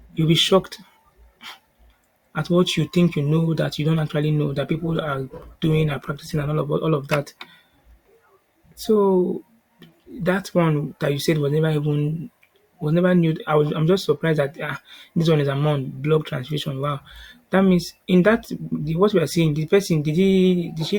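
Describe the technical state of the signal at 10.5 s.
At 10.5 s the speech signal is intact, with no audible dropout, distortion or other fault at that moment.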